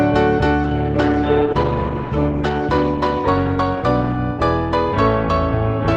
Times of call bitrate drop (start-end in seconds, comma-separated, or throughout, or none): 0.64-5.97